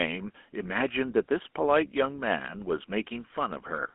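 Throughout, the speech carries GSM full-rate codec damage. The codec rebuilds the voice from a vocal-tract model fed by sparse, evenly spaced pulses. The result is a plainly buzzy, gravelly roughness. The band runs from 250 Hz to 3.4 kHz, with nothing above 3.8 kHz.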